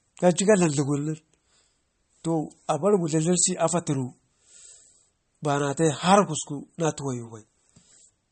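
Speech runs the whole clip with plainly audible MP3 compression damage. Nothing comes through above 8.4 kHz, a hard treble ceiling consistent with an encoder starved of bits; the cut-off and degree of damage point to a low bitrate around 33 kbps. Weak spectral lines drop in and out frame by frame, giving a watery, swirling texture, metallic chirps on sibilants and smeared consonant attacks. The likely cause is low-bitrate MP3 encoding.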